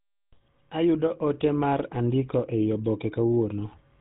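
Throughout, the GSM full-rate codec, fitting 13 kbps pulse-excited coding, has cut everything above 3.8 kHz and left the speech plainly buzzy and gravelly.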